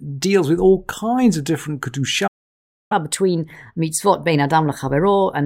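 At 2.27 s, just after "all kinds of different", the speech cuts to silence for about 0.63 s: a playback stall, likely from the player's buffer running dry or its thread being blocked. From 2.92 s to the end, the player performs catch-up at higher speed, resampling its backlog at 1.15 times normal, so speech runs faster and roughly two semitones higher.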